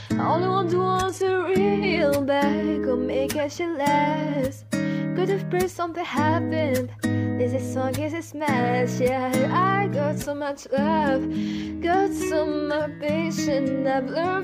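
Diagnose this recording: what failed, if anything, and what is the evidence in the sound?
The failure is an adaptive stream starting at a low bitrate, which sits at the network and codec stage. From 0.0 to 2.0 s the top end is thin and partly synthetic, with nothing above about 12.3 kHz and heavier codec artefacts. At 2.0 s the quality jumps up cleanly with no dropout. That behaviour points to the player opening on something like a 16 kbit/s HE-AAC rendition for a fast start, then switching to a roughly 96 kbit/s AAC-LC stream once it had measured the connection.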